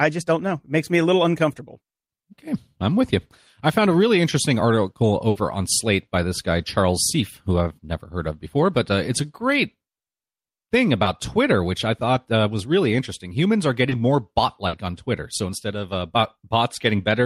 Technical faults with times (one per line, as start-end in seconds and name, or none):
5.29-5.37 burst of packet loss
11.03-11.07 short concealed packet loss
13.89-13.93 short concealed packet loss
14.67-14.75 burst of packet loss